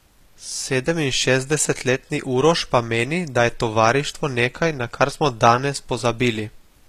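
Throughout the speech, the upper spectrum sounds synthetic rather than recorded, which points to HE-AAC compression at a low rate, likely around 24 kbps. Only the lower band is truly coded; the treble is regenerated by copying lower bands upward, so s sounds come out gritty and metallic, with harmonics that fail to line up above the crossover. On a spectrogram the top band looks smeared and blocky, and nothing appears above 14.9 kHz.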